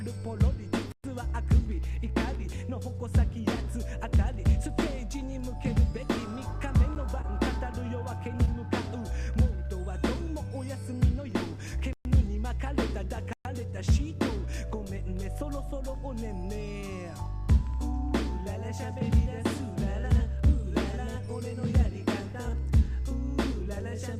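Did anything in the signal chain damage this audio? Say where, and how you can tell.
Yes. The driver or buffer stage produced blocks of digital silence at 0.92–1.04 s, 11.93–12.05 s and 13.33–13.45 s, each 120 ms long, plus an 11 ms one at 6.95 s. The audio drops to zero with no fade. The output buffer likely wasn't filled in time.

The network caused short concealed packet loss at 7.21–7.25 s and 8.45–8.49 s. About 20 ms of audio was missing each time. The receiver filled it by extending the preceding sound, then blended back. You hear a brief smear rather than a hard gap.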